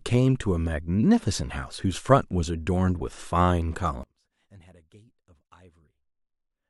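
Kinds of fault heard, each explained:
One channel inverted: from 4.03 s to the end, the speech falls by about 29 dB and becomes faint. The likely cause is reversed polarity on one stereo channel, so the centred speech, common to both channels, cancels when they are summed to mono.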